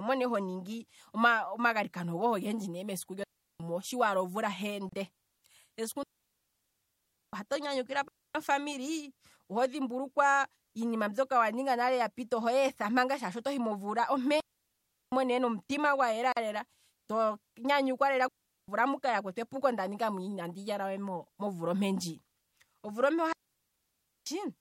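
At 3.24 s, right after "ne mesiku", the speech drops into a clean hole for 0.36 s before "mo shiwala". That's a digital wireless dropout: the receiver lost too much data and muted, with no noise burst on either side. It happens again at 6.03 s (1.3 s), 8.08 s (0.27 s), 14.40 s (0.72 s), 18.28 s (0.40 s) and 23.33 s (0.94 s, after "omvula ompe"). There are also short gaps at a join of encoded pieces at 4.89 s (33 ms) and 16.32 s (43 ms, between "ne nomutima gwa" and "lela to nyanyukwa"). Those are brief silences with smeared edges, where separately encoded chunks were spliced without trimming the padding, and the speech then picks up right where it stopped.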